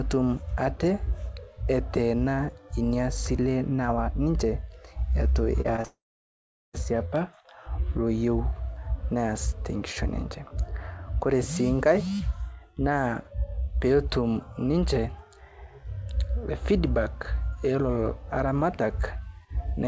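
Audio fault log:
5.61 to 5.86 s, short concealed packet loss: brief smears at 5.61, 5.76 and 5.81 s, where 20 to 40 ms gaps were patched by extending the preceding sound.
5.86 to 6.75 s, long network dropout: a fading buzz, then about 0.76 s of silence before speech returns with nearly 0.9 s missing, likely from audio lost in transit.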